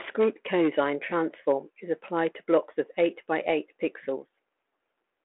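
Nothing goes wrong in this one: the speech just comes down a G.726 line at 32 kbit/s, so it sits in the ordinary telephone band of about 300 Hz to 3.5 kHz, which is simply how that kind of link sounds.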